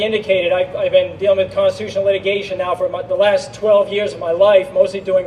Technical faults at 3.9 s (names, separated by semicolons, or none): none